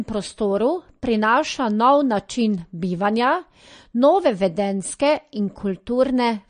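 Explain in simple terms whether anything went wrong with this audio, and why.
Throughout the speech, everything above 9.6 kHz is gone, and the damage is plainly audible. The likely cause is MP3 compression, which discards detail to save space.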